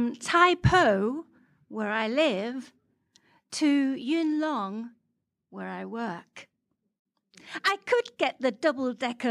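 A digital gain change, likely applied without a ramp, drops the level by about 4 dB at 4.02 s, a sudden gain jump where speech and background fall together.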